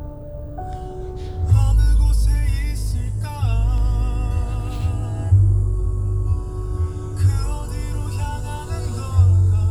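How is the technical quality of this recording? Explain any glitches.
The recording has no technical glitches: the signal stays continuous and stable throughout, with nothing in the audio path interrupting or altering it.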